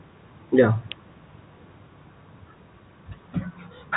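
Nothing to flag here: the speech has the narrow, phone-line sound of G.711 telephone coding, with the lowest bass trimmed away the way a call microphone normally does.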